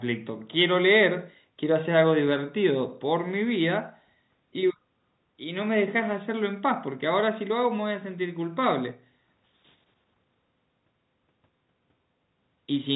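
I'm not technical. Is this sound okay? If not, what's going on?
Yes, this sounds fine; nothing is wrong here.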